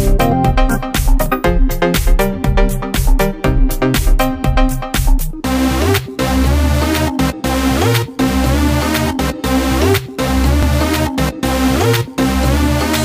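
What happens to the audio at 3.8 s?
Nothing goes wrong at 3.8 s; the audio plays through that moment intact, with no dropout, glitch or other fault.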